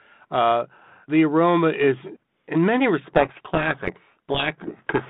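From 3.04 s to the end, the speech is buried in harsh distortion: a codec payload misread, with G.726 code words decoded in reversed bit order.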